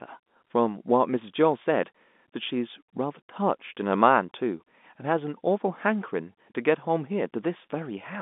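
No technical faults are audible in this speech recording.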